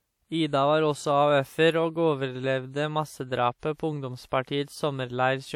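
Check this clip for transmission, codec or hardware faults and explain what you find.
One codec fault runs through the whole recording. Low-bitrate audio saved at a high bitrate, present from start to finish: the speech sits in an MP3 container whose high bitrate does nothing to restore detail, and there is no content above 18.4 kHz. This is likely the result of an earlier low-bitrate encode, which fits something like a 64 kbit/s WMA source, being re-encoded at around 320 kbit/s. The second pass carries over the first encoder's losses unchanged, so the file is large but sounds no richer than its low-bitrate origin.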